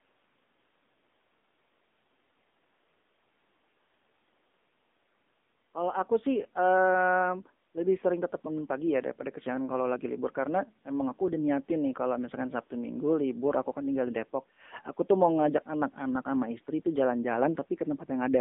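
From start to finish the speech carries AMR narrowband mobile codec damage: the band runs from about 200 Hz to 3.6 kHz, nothing passes above 3.7 kHz, and the codec's coloring is plainly audible, which fits the 7.95 kbps AMR-NB mode. The codec rebuilds each stretch from a vocal tract model excited by a few pulses per 5 ms. That produces a buzzy, synthetic quality, and the buzz is what separates it from a simple telephone-band filter, which would only dull the sound.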